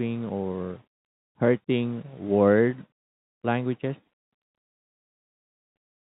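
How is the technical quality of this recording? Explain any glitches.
The technical quality is sound, with no glitches to explain.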